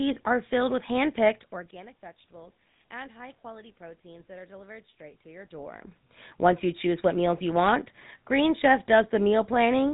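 Throughout, the speech passes through a GSM full-rate codec. Its coarse vocal-tract model and sparse pulse excitation, consistent with a 13 kbps stream, leave plainly audible buzzy, gravelly roughness and nothing above 3.8 kHz. Level shifts around 1.5 and 5.5 s are the talker moving.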